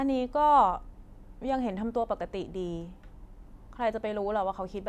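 No technical faults can be heard anywhere in the recording.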